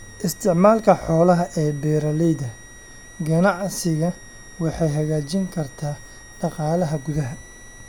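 A switching supply whistle runs throughout the speech, a thin high tone wandering between about 1.87 and 1.96 kHz, sitting roughly 25 dB below the speech. It comes from a switch-mode power supply whose switching activity has dropped into the audible band, leaking into the audio path. As the supply's load shifts, its switching rate moves, so the whistle's pitch drifts within that narrow band rather than holding one steady frequency.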